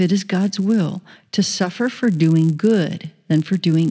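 Throughout the speech, a resampler restarted on every block causes a steady buzz at 100 Hz. Each 10 ms block was converted from 44.1 kHz to 16 kHz on its own. Every block edge leaves a small error. The buzz sounds only while speech is present.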